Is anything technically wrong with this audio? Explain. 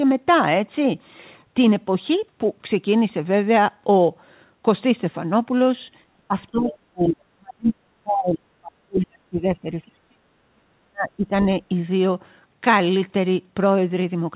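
Yes. There are two related faults, heard over audio that is band-limited to about 4 kHz, which fits a narrowband G.711 call.

Speech suppressed in double talk occurs at 6.28–6.35, 6.51–6.72, 6.88–9.65, 9.85–10.2 and 10.47–11.32 s. The likely cause is an echo canceller that could not tell the talker apart from the far side's loudspeaker echo while both spoke, so it pulled down everything. The first two dips are shallow, roughly 15 dB. From 6.88 s the cuts go much deeper, around 40 dB, and last about two seconds in the longest stretch. Unlike packet loss, the voice dips, loses its high end or cuts out in pieces without clicks or repeated fragments.

The other side's voice leaking through appears at 6.69–6.78 s, right as the second dip ends. It is likely residual echo the canceller failed to remove, and it sounds like a brief scrap of a different voice about 15 dB below the talker. It is separate speech, not a reverberant tail of the talker's own sound, which sets it apart from room echo.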